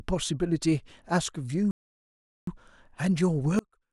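At 1.71 s the speech cuts to silence for about 0.76 s, resuming at 2.47 s: a playback stall, likely the player starving for data or its thread blocking. From 3.59 s to the end the level falls by about 34 dB and the speech nearly vanishes, consistent with one channel inverted in polarity cancelling the centred signal in mono.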